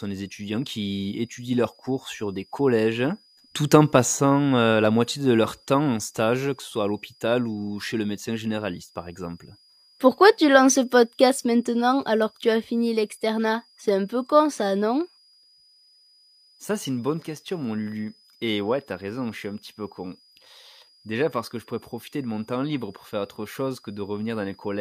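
A switching power supply somewhere in the recording chain is running in an audible burst mode or beating with another one, so its switching frequency leaks into this speech clip as a switching supply whistle for the whole recording. It sits as a thin, high whistle, wandering between about 4.8 and 5.0 kHz rather than holding a fixed pitch, roughly 35 dB below the speech.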